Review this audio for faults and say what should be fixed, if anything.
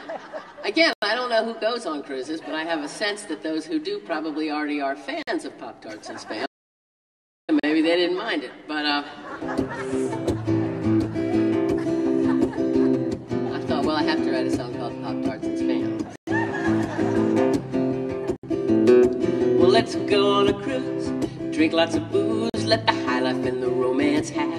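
Six short Bluetooth stalls break the sound: at 0.93 s (92 ms), 5.23 s (49 ms), 7.60 s (38 ms), 16.16 s (116 ms), 18.36 s (71 ms) and 22.50 s (44 ms). Each is a brief cut to silence before playback resumes, likely from radio interference delaying packets until the headphone buffer emptied. On a waveform each shows as a flat notch. A spectrogram shows a thin vertical blank column across all frequencies. Reducing interference or keeping the source closer to the headphones would prevent it.

An audio dropout to silence runs from 6.46 s to 7.49 s, about 1.02 s of lost material. The likely cause is a brief loss of the input signal while writing continued with zeros. Sound stops abruptly mid-flow and returns just as abruptly, with no room tone in between. The waveform shows a flat line. The spectrogram shows a solid black band, clearly wider than the stall gaps. Securing connections and checking mute states before recording would prevent it.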